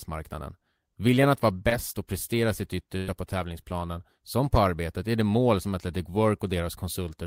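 At 1.69 to 1.73 s, between "att vara" and "och prestera sitt", about 20 ms of the stream arrives too late to decode. This is short concealed packet loss: the receiver extends the preceding speech to bridge the hole, leaving a brief smear as it blends back.

From 2.97 to 3.09 s, after "och prestera sitt", a burst of packet loss removes about 100 ms. The decoder keeps extrapolating the last sound while fading it, producing a fading fill instead of silence, before the speech resumes at "på tävlingsplanen som på" with that stretch gone.

At 5.63 to 5.67 s, just after "arbetet är det mål", another short concealed packet loss drops about 20 ms. The patch continues the prior sound only briefly, so it registers as a quick smear or wobble in the speech.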